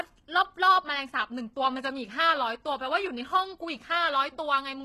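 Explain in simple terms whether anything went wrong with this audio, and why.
Yes, something went wrong. All the way through, the hiss of s sounds comes out gritty and metallic, and nothing is left above about 12.3 kHz. That likely comes from HE-AAC compression, which fakes the treble by copying lower sounds upward instead of keeping the real ones.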